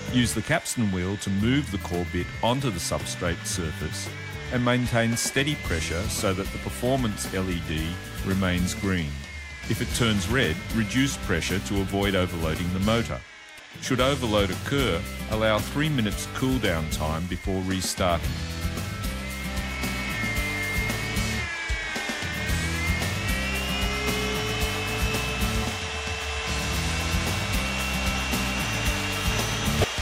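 At 13.56 to 13.59 s, and again at 29.81 to 29.84 s near the very end, a brief burst of damaged data in a compressed stream breaks through the sound as a short glitch lasting about 34 ms. Corrupted bytes in the encoded stream leave the decoder unable to read those frames correctly, so it loses sync and outputs garbled material until it locks onto the next valid frame header.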